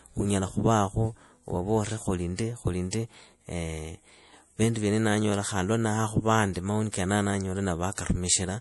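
Across the whole speech clip the treble is missing, with nothing above 11.4 kHz, and a plainly audible watery, swirly texture sits on the sound. The likely cause is MP3 compression at a low rate, which fits a 48 kbps encode. Starved of bits, the encoder cuts the top band at a fixed point and discards weaker frequency lines, which flicker in and out from frame to frame and leave that unstable, underwater quality.

At 2.91 s a short hiss rises just ahead of a sharp onset and runs for about 21 ms, so the attack arrives softened and blurred. At 7.95 s the same pre-echo happens again, this time stretched over about 31 ms. In both places the attack lands late in a transform block. The quantisation noise scaled to the loud onset is spread evenly across that block and spills into the quiet moment just before it.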